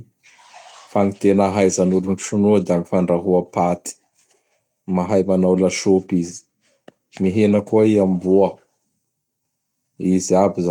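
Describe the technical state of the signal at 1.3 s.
At 1.3 s the speech signal is intact, with no audible fault at that point.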